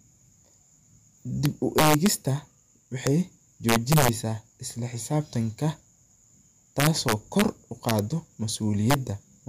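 Integer overflow strikes the speech at 1.46–2.07 s, 3.07 s, 3.69–4.09 s (just before "isla xisaabtanka"), 6.80–7.42 s, 7.89–7.99 s and 8.90–8.94 s. Loud peaks, pushed up to about 4 dB past full scale, wrap to the opposite sign instead of being held at the limit. Each jump crosses the whole range, so the result is violent cracks rather than clipping's flattened, buzzy distortion.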